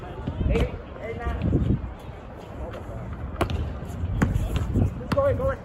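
No technical faults can be heard anywhere in the audio. Nothing in the sound breaks, drops out or changes in a way that would point to a problem in the recording or playback chain.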